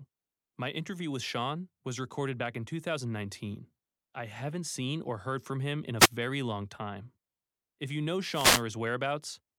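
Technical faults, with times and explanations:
5.98–6.09 s and 8.32–8.63 s, wireless microphone noise hit: the analogue FM radio link fades as reflected paths cancel, letting receiver noise rise. A brief static burst follows "from him in a", and a longer 0.31 s swish follows "you know".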